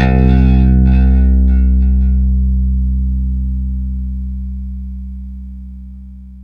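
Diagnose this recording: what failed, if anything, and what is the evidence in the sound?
Nothing in this recording of everyday sounds points to a failure at any stage of the chain. There is no dropout, distortion or other disturbance that would suggest a fault in the wiring, conversion, processing, transmission, storage or playback.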